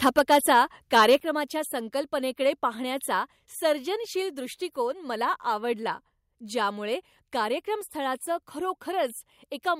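From 0.06 to 0.57 s the speech shows microphone overload. Peaks run about 6 dB past the converter's limit, so a small share of samples have flattened tops, giving the loudest syllables a harsh, crackly edge. The likely cause is input gain set too high for the converter. At 0.19 s, in the middle of that stretch, the microphone volume steps down by about 4 dB. Voice and background drop together in one abrupt move, likely the call software reacting to the clipping by lowering the device input level.

A second overload runs from 0.95 to 1.16 s, about 5 dB over, with roughly one sample in twenty clipped. The distortion is a gritty breakup on the peaks, likely from the same excessive input gain. At 1.2 s, just before "संकल्पनेकडे पाहण्याचा सर्जनशील दृष्टीकोन", the level steps down again, this time by about 7 dB. That is a drop in loudness right after the distorted peak, likely another automatic gain reduction. 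A last, slight step of about 1 dB comes at 3.24 s, between "संकल्पनेकडे पाहण्याचा" and "सर्जनशील दृष्टीकोन मला आवडला". It is likely a final trim by the same gain control.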